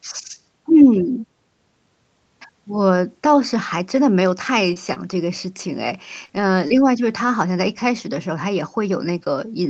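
Between 4.73 and 6.78 s the speech picks up a handful of brief ticks and small smeared hiccups, about four of them, each very short, the longest around 20 ms. These are scattered short gaps. A few packets arrived late or not at all, about 80 ms of audio in total, and the receiver covered each hole by stretching the preceding sound, rebuilding about 140 ms, which is why the sound smears instead of dropping to silence. The band limit near 8 kHz fits a wideband Opus call path.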